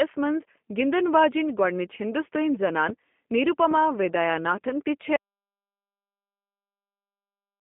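From the start the speech sounds narrow, slightly rough and synthetic, with nothing above about 3.5 kHz and the low end thinning below roughly 200 Hz. That is the G.729 codec at work: each 10 ms frame is rebuilt from a vocal tract filter, a pitch predictor and a handful of pulses rather than the actual waveform, inside a telephone band of 200 Hz to 3.4 kHz. The damage is plainly audible, and the roughness fits an 8 kbit/s G.729A link.

At 2.89 to 2.92 s a sharp, loud pop jumps out well above the speech, and a second, softer pop follows at 3.71 to 3.74 s. Each is a single short click, and the speech carries on underneath both. Sudden isolated spikes like these are likely voltage transients from a plug, switch, static discharge or driver glitch, shaped by the circuits that followed into brief pops.

At 5.16 s the speech cuts off abruptly into silence with no room tone, and it stays silent to the end of the clip. 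This is an audio dropout to silence, likely from the input being lost through a disconnected device, a failed link or an accidental mute while the recorder kept writing silence, so whatever followed is missing.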